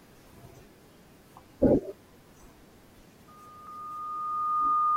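At 0.54 s, damaged data in a compressed stream produces a brief glitch: corrupted frames throw the decoder out of sync until it finds the next header. A spectrogram shows a thin vertical smear of broadband energy, and the waveform shows a discontinuity. The same glitch recurs at 3.67 s. From 3.28 s to the end, a loudspeaker feedback squeal builds over roughly one and a half seconds. A microphone re-amplifying its own loudspeaker output reaches runaway gain at 1.2 kHz and ends about 10 dB above the speech. A spectrogram shows this as a steady horizontal line that brightens over time, and the waveform envelope swells steadily.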